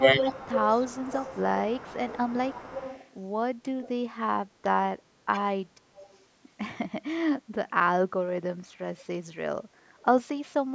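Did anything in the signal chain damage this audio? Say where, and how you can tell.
Yes, the call processing stage. Speech suppressed in double talk: the voice dips about 15 dB at 0.0–0.25 s and 5.31–5.37 s, and about 25 dB at 7.69–7.79 s, likely the echo canceller ducking both talkers.

Echo leak: a copy trailing the voice by 219 ms runs from 0.19 to 3.07 s at about 15 dB down. Fainter scraps come at 3.82–3.89 s and 5.96–6.16 s, likely a far-end speakerphone's canceller letting residue through.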